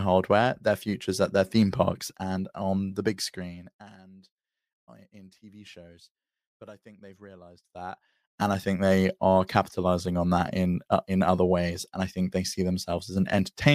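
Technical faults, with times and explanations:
2.83–3.97 s zipper noise: a fast ticking buzz after "their theme parks and" as the level drops roughly 25 dB in unsmoothed steps, about a hundred per second.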